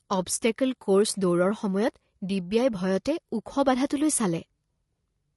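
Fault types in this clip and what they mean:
Low-delay AAC compression: the speech sounds rough and grainy throughout the clip, with a noisy haze filling the gaps between the voice's harmonics and a top band that sounds thinned or synthetic. This is likely a low-delay codec such as AAC-ELD. At low bitrate it has too few bits to code pitch harmonics cleanly, and the plainly audible damage fits a bitrate around 32 kbps.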